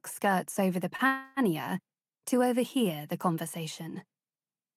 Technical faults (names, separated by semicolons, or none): short stall from a late packet; call audio freeze